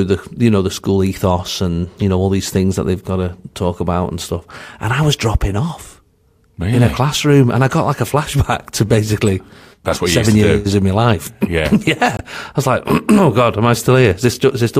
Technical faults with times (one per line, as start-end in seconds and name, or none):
9.27 corrupt frame decoded
12.17-12.21 corrupt frame muted